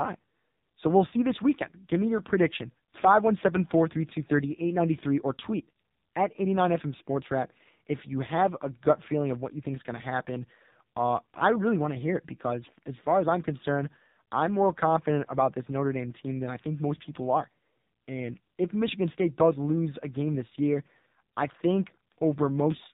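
From start to finish the speech carries the sound of the AMR narrowband mobile codec, heavily degraded, at a low bitrate, which fits the 5.9 kbps mode. Everything above 4 kHz is gone, so sibilants lose their hiss and the voice turns boxy and buzzy, with a synthetic, reedy edge. On a spectrogram the energy stops flat at 4 kHz, and the harmonics look smeared and blocky in 20 ms steps.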